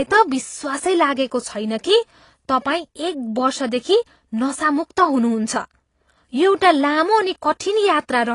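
Speech runs through the whole clip with plainly audible AAC compression damage, likely from AAC-LC coding at a low rate, which fits about 32 kbps. Nothing sounds above 11.2 kHz, and sibilants turn fizzy and warbling. A simple low-pass filter would dull the top just as much but leave what remains clean, so that swirling texture points to a codec.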